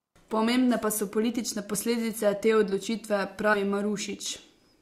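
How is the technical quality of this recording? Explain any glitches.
The recording has two brief glitches, both compressed frames skipped. At 1.73 to 1.76 s, roughly one frame (about 20 ms) of speech is lost, and at 3.53 to 3.57 s, about three frames (roughly 70 ms). Each time, the decoder jumps past missing or rejected frames, which fits a 20 ms frame length. Unlike a dropout, there's no silent gap; the audio simply jumps ahead by the length of the frames left out.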